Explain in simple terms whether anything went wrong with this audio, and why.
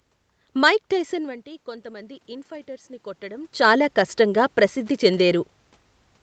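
The automatic gain rising came from the call's level control. When the voice dropped around 1 s, as the talker moved back, it slowly turned the volume up from 0.91 to 4.59 s, so voice and room noise swell together.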